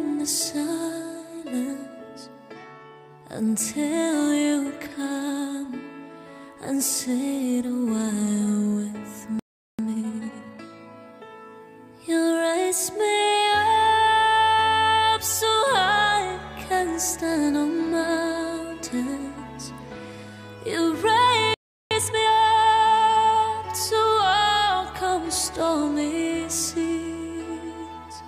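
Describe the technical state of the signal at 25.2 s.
At 25.2 s the signal is intact, with no dropout, distortion or other technical fault audible at that moment.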